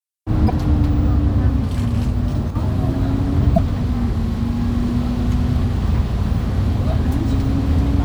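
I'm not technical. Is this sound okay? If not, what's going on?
No. Three times, part of the compressed file carrying this sound was corrupted, which is damaged data in a compressed stream. When the player hits a spoiled stretch, it can't read it properly, loses its place, and has to hunt for the next clean starting point. You hear this as a tiny chirp or blip, each lasting only a few hundredths of a second, at about 0.48 to 0.50 seconds, 3.54 to 3.59 seconds, and 7.49 to 7.51 seconds.

Separately, from about 2.50 to 2.55 seconds, the sound suddenly gets quieter for a split second and then comes back. The likely cause is that one channel drops out: one of the two stereo sides briefly goes missing, so whatever both sides shared loses some of its loudness, and anything that was only on the missing side vanishes for that moment.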